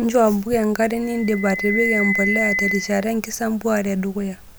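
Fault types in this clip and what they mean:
Loudspeaker feedback squeal: a microphone is hearing the loudspeaker it drives, and at one frequency the loop gain tops unity. That frequency feeds on itself. Here a pure tone at 2 kHz appears at 1.03 s and swells over roughly three-quarters of a second until it sits at about the same level as the speech, then stops at 3.18 s. It differs from a steady electrical whine or test tone because it grows by itself from nothing instead of starting at full level.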